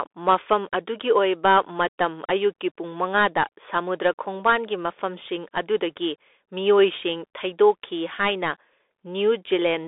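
A speech recording carrying Bluetooth CVSD headset codec damage throughout: the band is confined to roughly 300 Hz to 3.6 kHz, s sounds come out scratchy, a granular hiss sits underneath, and louder high-frequency moments distort where the one-bit, adaptive-step delta coding, consistent with a 64 kbps link, cannot keep up.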